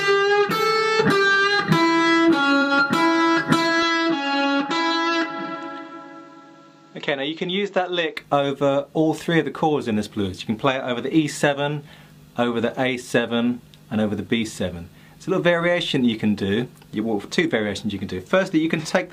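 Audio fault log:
2.61 to 2.72 s and 18.78 to 18.85 s, AAC frame loss with concealment: two short smeared patches, about 110 ms and 64 ms long. The decoder lost compressed frames and filled the gaps by reusing the last good spectrum with altered phase or interpolated energy. That is why each patch has a blurred, smeared quality rather than a clean dropout. The first gap fits two lost frames, the second a single frame.
3.83 to 8.17 s, input switched to a poorer device: the sound abruptly turns duller and boxier with no gap at the switch. Nothing is present above 7.8 kHz, the level drops by roughly 5 dB, and a faint new noise floor sits around 40 dB under the signal. At 8.17 s the full band and level return. The sudden change in bandwidth, tone and noise is likely caused by the recording input changing to a narrower-band microphone and then back.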